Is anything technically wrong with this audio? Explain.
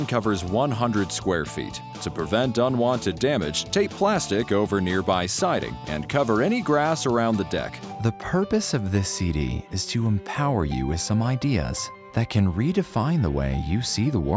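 No, no technical faults present.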